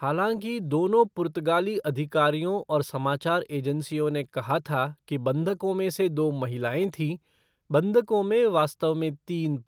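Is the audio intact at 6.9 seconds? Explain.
Yes, the speech at 6.9 seconds is intact, with no audible fault at that moment.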